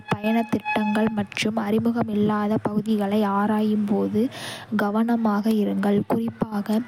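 No technical faults are audible anywhere in the speech.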